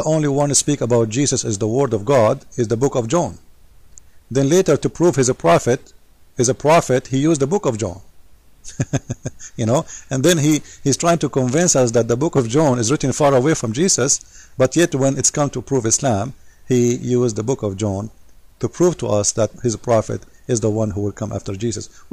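Hard clipping runs through the whole audio: the signal is driven about 4 dB past what one stage can pass, so its loudest peaks are sliced flat. Only a small fraction of samples are hit, giving brief crackle on peaks rather than the rounded, continuous thickening of soft saturation.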